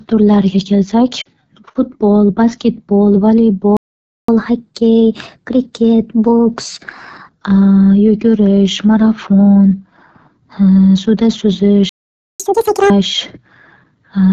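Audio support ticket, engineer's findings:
AMR wideband (HD Voice) codec, whole clip. Rough, raspy speech with a hissy top band instead of real detail above 6.4 kHz. Sounds like AMR-WB in one of its two lowest modes, which fits 8.85 kbit/s. Unlike generic low-bitrate smearing, the buzz comes from the pulse-excited vocal tract model and the noise-filled 6.4 to 7 kHz band. Damage is constant and plainly audible, not tied to events.

Lost AMR speech frames, 1.21 to 1.28 s. A 40 ms fade to near silence where the decoder repeats the last pitch and vocal tract settings at falling gain. The span fits two lost 20 ms frames. It differs from a stall because the sound never drops to true silence or resumes late. It is concealed rather than stopped, and briefly rough on recovery.

Playback stall, 3.77 to 4.28 s (about 517 ms) and 11.89 to 12.40 s (about 504 ms). Speech stops dead mid-flow, then resumes. 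Likely the player's buffer ran dry or its thread blocked. This is distinct from frame loss because the gap is silence with no decoder-smoothed fade, and it lasts far longer than a few frames.

Catch-up at higher speed, 4.28 to 7.28 s at 1.1x and 12.40 to 12.90 s at 2.0x. Tempo and pitch rise together, by about a semitone and a half and then by about ten semitones. The player is resampling the backlog after each stall. Each fast stretch follows a stall directly and returns to normal pitch, unlike a constant clock-rate mismatch.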